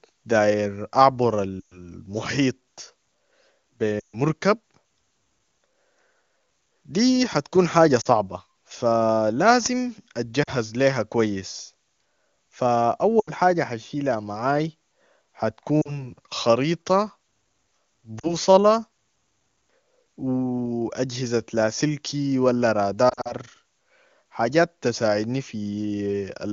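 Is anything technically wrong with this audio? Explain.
Yes. This speech has lost AMR speech frames at 1.60–1.88, 4.00–4.17, 8.01–8.08, 10.43–10.50, 13.19–13.30, 15.81–16.10, 18.19–18.34 and 23.09–23.34 s. Corrupted frames failed their check, so the decoder repeated the last good pitch and vocal tract settings at falling gain. The 120 ms and 140 ms gaps near 1.6 and 4.0 s drop to near silence within two frames before speech returns weakly. The 40 ms gaps are brief. The 23.1 s event scatters short losses across 160 ms. Unlike a hard dropout to silence, each gap decays smoothly. The AMR wideband (HD Voice) codec itself sounds clean, which fits its top rate.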